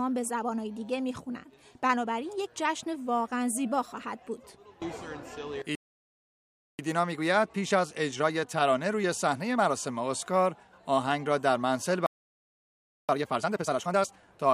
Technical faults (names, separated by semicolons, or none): playback stall; time-compressed catch-up